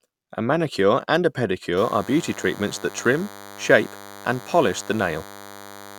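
From 1.77 s, just after "manicure and a", a DECT cordless phone buzz sets in and runs to the end of the clip. A nearby DECT handset or base transmits a brief radio burst every 10 ms, which the audio circuitry rectifies into a thin, steady 100 Hz buzz, roughly 20 dB below the speech. On a spectrogram it shows as evenly stacked horizontal lines at 100 Hz multiples; the waveform carries a regular comb of spikes at 10 ms spacing.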